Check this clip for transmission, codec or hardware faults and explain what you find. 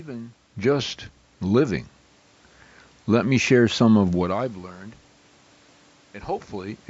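One fault stands out: a gain control stage ramping up partway through the speech.

Automatic gain rising, from 3.07 s to 4.59 s. The automatic gain control judged the incoming level too low and stepped its gain up over roughly a second and a half, by about 4 dB in total. Because the boost is applied to everything the microphone picks up, the speech and the room noise beneath it swell together, rather than the voice alone getting closer. The talker's own shift in distance around 4 s sits inside this ramp but is a separate, natural change.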